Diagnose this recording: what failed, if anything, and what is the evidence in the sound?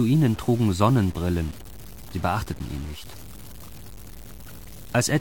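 Grainy distortion that tracks the sound throughout, about 20 dB down, unlike steady hiss: low bit depth without dither, likely 7-bit truncation at sample-format conversion.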